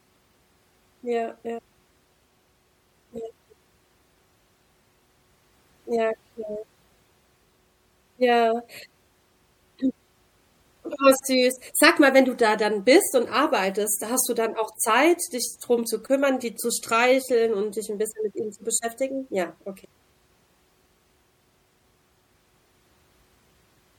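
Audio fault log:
Throughout, MP3 compression: the speech has a plainly audible watery, swirling quality, with dulled treble and smeared onsets, and the likely cause is MP3 encoding at a bitrate around 64 kbps. With bits that scarce, the encoder removes high frequencies above a fixed cut-off and drops faint spectral lines that flicker in and out from frame to frame. That flickering produces the swirl, and coarse quantisation blurs the sharp starts of sounds.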